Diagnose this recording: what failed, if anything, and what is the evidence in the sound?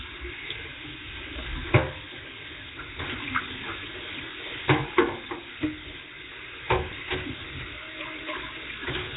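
At the codec stage, the whole recording has a rough, hissy halo and a smeared, underwater character. Nothing is present above 3.8 kHz, and weaker bands sound as if they were replaced with noise rather than removed. The cause is likely Nellymoser compression at heavy damage, consistent with a low bitrate near 16 kbps. A plain low-pass filter would sound dull but clean. The noise-filled bands and block smearing point to a coarse transform codec instead.

At the driver or buffer stage, the sound stops abruptly at 6.92 s for about 1.3 ms. The waveform flattens at a held level. This is an underrun with held sample: the output buffer emptied, and the converter sustained its last value until data resumed. The gap spans 64 samples. About 1.5 ms of audio was lost during the gap. A dropout to zero would click harder at its onset.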